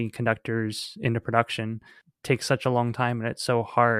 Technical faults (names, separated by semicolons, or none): dropped buffer (overrun)